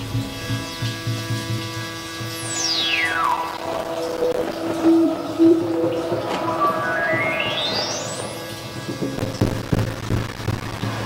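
At 1.58 s there's a skip ahead: roughly a fifth of a second of audio got dropped and playback jumps straight on, the two sides butted together with no gap.

From 3.14 to 4.56 s, and again from 9.17 to 10.85 s, you get processor overload crackle. The machine kept missing deadlines on tiny buffers, a few milliseconds each, and every miss left a hard-edged sliver of silence. Dozens of these in the first burst and well over a hundred in the second pile up into a gritty, tearing crackle.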